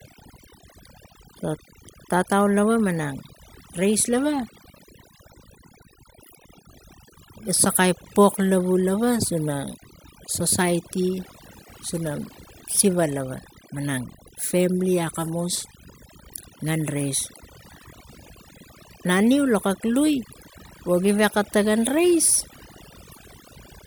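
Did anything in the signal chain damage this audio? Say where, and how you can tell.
Yes. The damage comes from the processing stage, as overdone noise removal running through the whole clip. A noise reducer was pushed too hard on a noisy speech recording. In the gaps, the background drops to near silence, dotted with twinkling specks. These are isolated frequency bands flickering on and off. The voice's quieter components fell close to the tool's noise estimate, so they were cut along with the noise.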